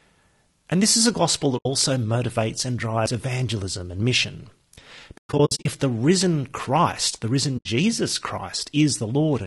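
It's a speech clip, and the whole thing has that rough, grainy texture with noise creeping between the harmonics and a thin, synthetic top end, most likely low-delay AAC compression of the AAC-ELD kind at a low rate, something around 32 kbps. The short frames just can't resolve the pitch detail well at that budget. On top of that there's AAC frame loss with muting: the decoder zeroes out missing frames, so you get soft-edged holes. One gap sits at 1.57 to 1.66 s, about 80 ms, between "this is a gospel" and "motivates and drives evangelism". A cluster of dropouts runs from 5.17 to 5.66 s, about 300 ms missing in total, with the longest run roughly a tenth of a second, just before "the risen". Another 80 ms hole comes at 7.57 to 7.66 s.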